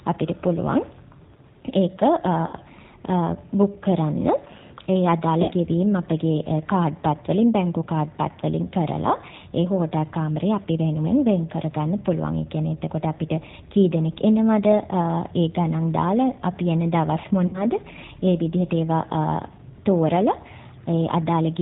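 From the start the whole speech clip runs through the G.729 codec at 8 kbit/s, and the damage is plainly audible. Everything above 4 kHz is gone, so it sounds muffled and a bit synthetic, because the voice is rebuilt from a filter, a pitch guess and a few pulses per frame.

There are three dropouts, at 2.47 to 2.55 s, 5.42 to 5.53 s and 17.47 to 17.65 s. Each is VoIP packet loss concealed by the speech codec. About 60 ms went missing each time, which fits two lost packets. The decoder stretches the last sound into a fading buzz or coloured noise, and the voice stays thin for a moment after packets return.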